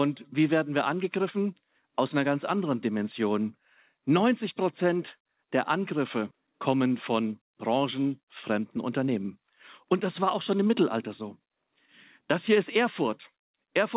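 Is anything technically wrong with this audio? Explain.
Yes. From 8.20 to 9.45 s and again from 9.85 to 11.73 s the speech turns briefly hurried, about 7% and 6% faster at unchanged pitch. This is jitter buffer speed-up. With excess audio queued, the receiver trimmed short pitch-period slices, removing roughly a tenth of a second each time.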